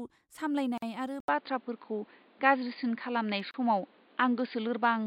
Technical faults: gap at a join of encoded pieces; input switched to a poorer device

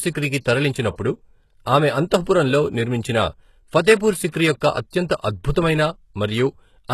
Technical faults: HE-AAC compression

